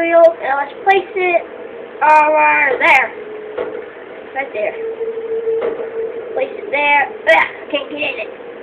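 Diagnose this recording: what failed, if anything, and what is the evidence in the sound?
Nothing failed in this recording, and the sound gives no evidence of a fault.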